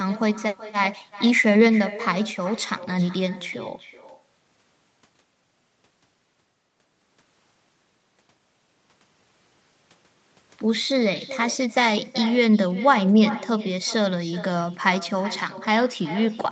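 From start to finish, every phrase is trailed by a fainter, thinner copy arriving roughly 400 ms later, about 16 dB below the direct speech. This is echo with no canceller. The far end plays the call over a loudspeaker, its microphone picks that playback up, and nothing strips it out, so the speech returns after the network round trip. The whole exchange is band-limited to 8 kHz by the call path.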